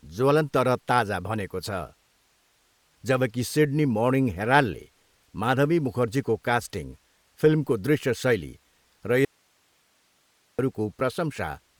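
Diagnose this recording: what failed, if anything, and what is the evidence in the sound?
The codec stage shows Bluetooth LC3 compression through the whole speech clip. The damage is plainly audible as a breathy, grainy edge, with nothing above 20.2 kHz. That texture points to a bitrate around 48 kbps in 10 ms frames, likely from an LE Audio link.

There is an audio dropout to a faint residue from 9.25 to 10.59 s, right after "फिल्मको दृश्य शैली र". The signal vanishes abruptly for 1.34 s. Only hiss remains, roughly 40 dB below the speech. The downstream path stayed live, so the break likely came upstream of it.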